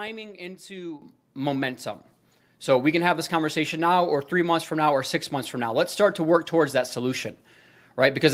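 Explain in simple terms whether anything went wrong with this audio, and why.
The speech and the background noise behind it suddenly get louder together, first a big jump at 1.02 s, then a smaller one at 2.04 s. This is a microphone volume stepped up fault: the call software judged the microphone too quiet and raised its input volume in abrupt steps.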